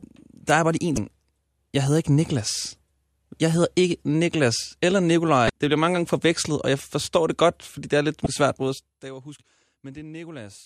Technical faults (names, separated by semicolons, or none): damaged data in a compressed stream